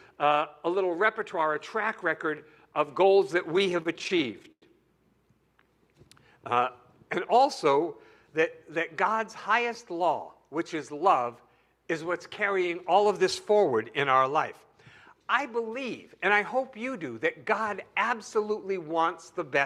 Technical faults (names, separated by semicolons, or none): repeated stalls (stutter)